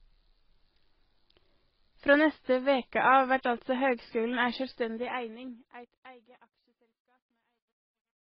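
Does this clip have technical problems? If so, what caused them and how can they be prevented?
Yes. The speech carries transcoding between lossy codecs throughout: nothing remains above 5.6 kHz, and MP3-style smearing sits under Opus coding texture, likely from a low-rate MP3 being re-encoded to Opus at around 24 kbit/s. Prevention: encode once, from the original uncompressed source.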